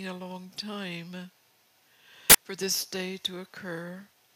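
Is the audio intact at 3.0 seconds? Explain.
Yes, the audio is intact at 3.0 seconds, with no fault present at that moment.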